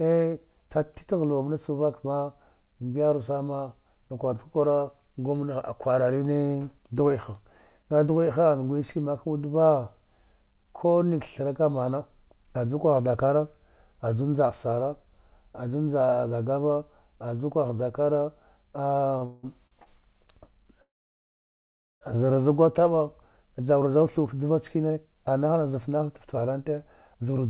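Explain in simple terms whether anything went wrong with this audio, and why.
Three things go wrong near the end of this speech clip. From 19.18 to 19.88 s there are repeated stalls (stutter). The sound catches four times, the longest for about 0.18 s, because data arrived late. Nothing is lost, but it drags.

From 20.82 to 22.03 s comes a call audio freeze. The sound stops for about 1.2 s and is nearly silent, then resumes where it left off. Delayed data is the likely cause.

Right after "za gwa taba", from 23.20 to 27.46 s, a jitter buffer speed-up follows. The speech runs about 9% faster at the same pitch as the receiver cuts tiny slices to catch up.

The call line itself also drops everything above 4 kHz, so the sound is a little dull throughout.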